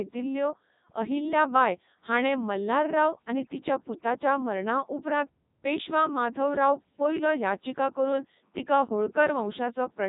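From start to finish the speech has passed through the Codec 2 vocoder, and the damage is heavy. Rather than carrying the waveform, the codec keeps only pitch, voicing, energy and a coarse spectral envelope, and the decoder rebuilds the voice from summed sine waves. The result sounds robotic and buzzy, with nothing above 3.8 kHz. The detail retained fits Codec 2's highest 3.2 kbit/s mode.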